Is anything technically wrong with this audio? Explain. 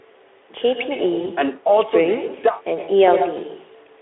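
Yes, there are two faults.

Echo with no canceller runs through the whole speech clip. The far end plays the call through a loudspeaker, its microphone picks that sound up, and nothing subtracts it before it is sent back. After a round trip of roughly a tenth of a second, every phrase is trailed by a copy about 10 dB quieter and thinner.

VoIP packet loss concealed by the speech codec occurs from 1.21 to 1.31 s. The missing audio fits a single 20 ms frame, and the Speex decoder, which is narrowband here with a line band of 300 Hz to 3.5 kHz, filled it by extrapolating from its last pitch and filter settings while lowering the gain. That fill sounds like a brief buzzy or coloured smear. Because each frame builds on the one before, the speech stays weakened for roughly 100 ms in total, well after the audio stream resumes.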